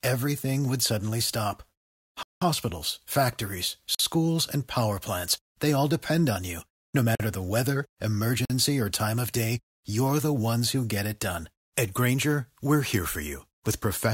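Speech drops out abruptly four times: a clear hole of about 190 ms at 2.23 s, then shorter holes of about 46 ms at 3.95 s, 7.15 s and 8.45 s. Each is a block of digital silence, most likely where the output buffer went unfilled and was sent as zeros. The lengths fit whole 2048-sample buffers, with the long gap spanning four of them.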